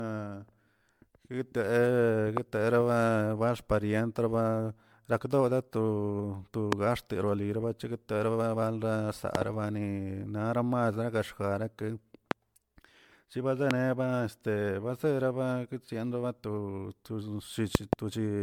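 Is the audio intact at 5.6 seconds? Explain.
No, at 5.6 s the speech has generation loss, as it does throughout the clip. It's likely from being re-encoded around five times, each pass requantising on a shifted frame grid and piling up noise and spectral holes. You hear swirly, hollow smearing and softened attacks, fitting a 96 kbit/s MP3 chain.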